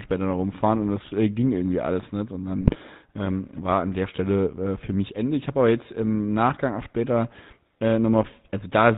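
GSM full-rate codec coding runs from the start of the clip to the end. The speech passes through a vocal-tract model fed with sparse, evenly spaced pulses, and everything above 4 kHz is gone. The result is a plainly audible buzzy, gravelly roughness, consistent with 13 kbps full-rate coding.

GSM bit errors strike from 2.61 to 2.79 s, just before "ähm war an der". Corrupted filter, pitch and gain values reach the decoder across a stretch that fits roughly nine 20 ms frames, so the spectrum warps and the level jumps into brief squawks, pops and gargling.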